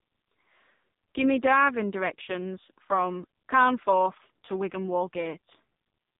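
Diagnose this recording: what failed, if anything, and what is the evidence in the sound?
The failure is at the codec stage: the speech has passed through the AMR narrowband mobile codec, heavily. Nothing above about 3.7 kHz survives, from start to finish. The voice sounds buzzy and synthetic, which points to one of the lowest AMR-NB modes, around 5.15 kbps. The codec resamples to 8 kHz and rebuilds the voice from a vocal-tract model fed by a few pulses per subframe. At so few bits, that rebuilt excitation is audibly crude.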